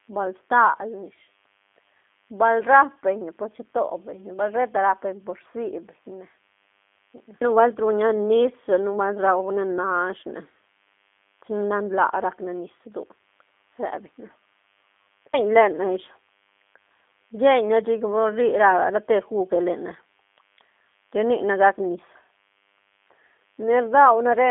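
From start to finish, a thin, steady DECT cordless phone buzz sits under the speech at about 40 dB below it. A nearby DECT handset or base pulses its radio every 10 ms, and the audio circuitry rectifies those bursts into a 100 Hz tone packed with harmonics. Mains hum, by contrast, is pinned at 50 or 60 Hz and sounds rounder and smoother. This buzz is gritty and edged, and the 100 Hz repetition rate gives it away.

Also present throughout is G.729 codec damage, plainly audible. The speech is squeezed into a line band of roughly 250 Hz to 3.5 kHz, with nothing above 3.5 kHz, and it carries the slightly rough, synthetic texture of a low-rate model-based coder that rebuilds speech from a vocal tract filter and sparse pulses, which fits G.729A at 8 kbit/s. Simple telephone band-limiting would sound muffled but natural. Here the grain points to the codec rather than just a filter.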